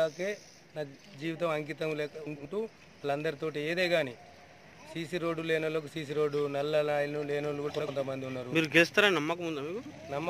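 Frames out of order at 2.26–2.46 s, 7.69–7.89 s and 9.81–9.91 s: two short blocks swap places, giving a garbled flutter, but unlike a dropout nothing goes missing.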